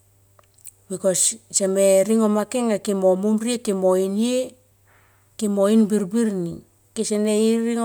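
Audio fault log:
Nothing stood out on listening to this speech clip.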